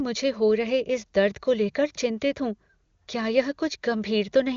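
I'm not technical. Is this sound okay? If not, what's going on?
Yes, this sound is okay, with nothing going wrong in it.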